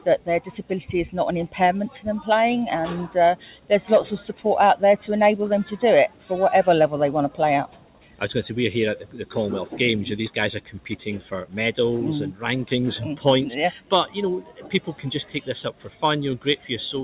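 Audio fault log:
Throughout: noise suppressor applied to music or sounds. Level swings by about 10 dB as held sound and decays are treated as noise and pulled down while onsets pass, giving pumping and thinning. Unlike a compressor, loudness doesn't drive it; steadiness does.
0.00–0.71, 3.35–3.71, 4.30–4.45, 6.09–6.31, 7.30–8.21, 9.00–9.26, 10.61–11.54, 13.78–16.65 s: sound cut by the noise suppressor. Sustained portions sink by about 10 to 11 dB and tails end early, longest near the end. Attacks mostly get through, so these aren't dropouts or packet loss, and the narrow band below 4 kHz comes from the call codec, not from the suppressor.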